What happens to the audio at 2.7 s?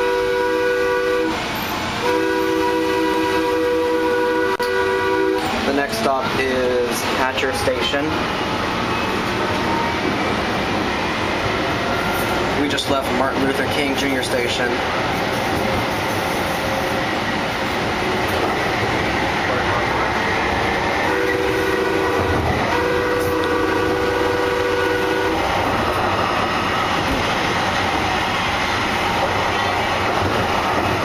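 At 2.70 s, GSM signalling bursts begin and run to 4.59 s: a nearby 2G phone's radio bursts are rectified by the audio circuitry, giving a galloping dit-dit-dit of short 216.7 Hz buzzes, roughly 15 dB below the programme level.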